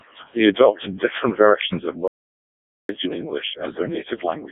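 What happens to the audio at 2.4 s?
At 2.4 s the audio is in the middle of an audio dropout to silence, running from 2.08 to 2.89 s, right after "adopted different versions of". The signal stops dead for about 0.81 s and comes back mid-flow with no room tone at all. That points to the input being cut off, likely a lost link or device, while silence kept being written. On a waveform it is a flat line, and on a spectrogram it is a solid black gap with hard edges.

Around that gap, the speech carries the heavy damage of the Codec 2 vocoder. The voice is rebuilt from sine waves using only pitch, voicing, energy and a coarse envelope, so it sounds robotic and buzzy, with a degree of mangling that fits its lowest 0.7 kbit/s mode. The spectrogram shows smeared, comb-like harmonics confined to roughly 200 Hz to 3.7 kHz, with nothing above.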